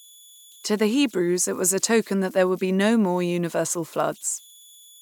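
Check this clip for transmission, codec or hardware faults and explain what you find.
There is one hardware fault, present for the whole clip. Converter idle tones run from start to finish: a delta-sigma converter working without dither settles into repeating bit patterns on small input levels, producing a whistle around 3 kHz in pauses and grainy noise under quiet speech, about 29 dB below the signal.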